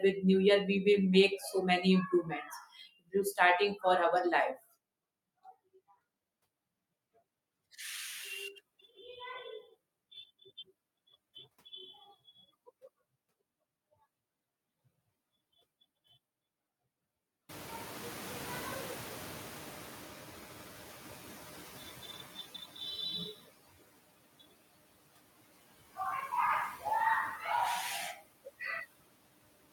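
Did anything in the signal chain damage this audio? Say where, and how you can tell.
Yes. The damage comes from call processing, where a noise suppressor was catching up. At around 17.5 s the room noise jumps by about 24 dB, settling about 20 dB below the speech. From 17.49 s the noise passes through with less reduction. It then sinks gradually until 22.38 s, ending about 10 dB lower. The suppressor's noise estimate trailed the sudden rise and took 4.89 s to adapt.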